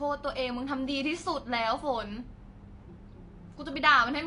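Speech, and it's dull and smeared the whole way through, with a warbly, fizzy edge on sibilants and nothing above about 10.6 kHz, likely AAC compression at a low bitrate, around 32 kbps.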